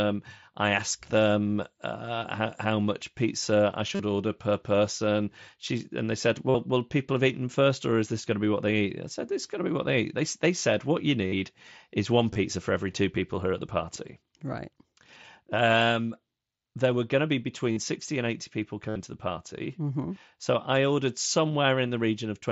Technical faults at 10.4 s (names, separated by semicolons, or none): none